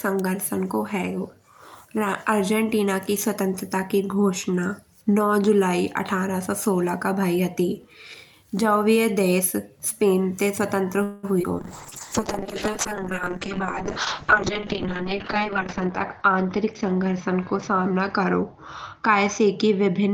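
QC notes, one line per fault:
11.03 to 11.25 s, call audio freeze: just after "ते स्वतंत्र" the sound stretches into a fading buzz or hiss for about 0.2 s, then resumes where it stopped. Nothing is lost. Delayed packets likely starved the jitter buffer, and the receiver extended the last sound while waiting.
11.39 s, short concealed packet loss: a brief smear lasting about 20 ms. That slice never reached the decoder in time. The receiver patched it by continuing the preceding sound, then blended back into the real audio.
11.42 s, skip ahead: immediately after, playback jumps forward with almost no gap. Roughly 70 ms of speech is gone, so the two sides join nearly directly. Later audio was already queued, and the missing stretch was dropped rather than waited for.
11.6 s to the end, call bitrate drop: the encoder fell from 64 to 7 kbps and stayed at the lowest rate for about 3.7 s. Coarser coding makes the voice rough and watery. 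Bandwidth narrows from 20 kHz to 6 kHz, so it also sounds muffled.
12.43 to 13.31 s, jitter buffer slow-down: speech runs at 96% speed with unchanged pitch. The buffer was running low or had just raised its target delay. The receiver repeated single pitch periods or bits of pauses many times, adding 41 ms in total. Sounds are slightly drawn out.
14.38 to 16.64 s, jitter buffer speed-up: speech runs at 107% speed, still at the same pitch, and sounds a little hurried. The buffer held too much audio, so the receiver trimmed short pitch-period pieces repeatedly, roughly 150 ms altogether.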